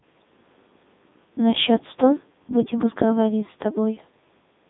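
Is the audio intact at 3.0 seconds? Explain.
No. At 3.0 s the speech passes through a Codec 2 vocoder, as it does throughout the clip. Only pitch, voicing and envelope survive at 3.2 kbit/s. Sine-wave resynthesis makes it buzzy and robotic. Nothing is heard above 3.8 kHz.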